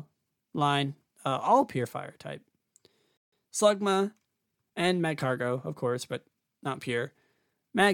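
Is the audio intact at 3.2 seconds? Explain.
No. A playback stall runs from 3.17 to 3.33 s, a gap of about 150 ms in which the speech stops mid-flow and the output falls silent. The likely cause is the player running short of data, or its thread being held up, so nothing reached the output until it recovered. What sets it apart from a short dropout is its length: a dropout is a brief tick-like hole, while this silence lasts long enough to be heard as a pause.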